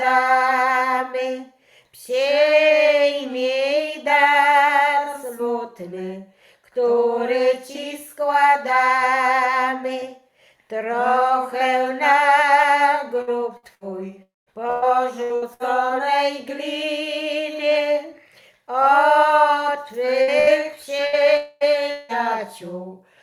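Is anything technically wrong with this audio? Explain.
Yes. Two stretches suffer repeated packet loss, each with a longer dropout inside it.

From 13.21 to 15.63 s there is repeated packet loss with a robotic sound. Seven gaps hit this span, the longest 113 ms. The receiver fills each hole by stretching the last sound it got. About 19% of the span is patched this way. The result is choppy, with pieces missing. A second burst runs from 20.22 to 22.12 s. It has four gaps, the longest 181 ms, and about 20% is concealed.

Inside each burst sits a longer hole, most likely a long network dropout. The first runs from 14.23 to 14.50 s. The last sound is held briefly, then about 190 ms of near-silence follows, and the audio resumes with that part lost. The second runs from 21.37 to 21.64 s. There the missing quarter-second is filled throughout by a stretched continuation of the last sound, with no silent gap.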